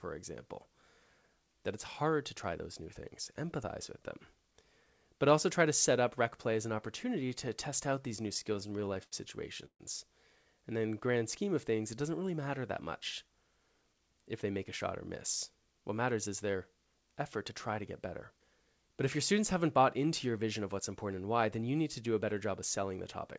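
Right after "an opportunity to test", from about 7.90 to 9.14 s, you get repeated stalls, a proper stutter. Packets were coming in late, so the jitter buffer kept running dry, fifteen times in that stretch. Each time the receiver just carried the last bit of sound on until more arrived. The longest hold is 83 ms, and about 218 ms gets padded in total, roughly 18% of the span. Nothing's lost, but it drags and hiccups.

Then at 9.66 to 9.81 s there's a short call audio freeze. The sound hangs for a moment, gets stretched out, then drops to silence for about 90 ms before carrying on where it left off. Around 138 ms is inserted and nothing is skipped. The likely cause is packets getting held up long enough to empty the buffer, and the overall delay ends up about 138 ms longer afterwards.

From 10.62 to 12.03 s the jitter buffer slow-down kicks in. With a thin reserve, it rebuilt one by repeating single pitch periods and slivers of pauses over and over, adding about 150 ms. 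Playback runs at about 90% speed but the pitch holds, so sounds come out drawn out.

After that comes jitter buffer speed-up, twice. From 13.87 to 14.59 s, just before "a shot or miss", the buffer was holding more than it wanted. It trimmed tiny pitch-period chunks to catch up, shedding something like 70 ms, and the audio plays at about 109% speed. Then from 15.50 to 17.09 s, after "a shot or miss", it happens again at about 107%, dropping around 150 ms. Both stretches sound hurried at unchanged pitch. All of this rides on a G.722 call path at 64 kbps, which is why there's nothing above 8 kHz.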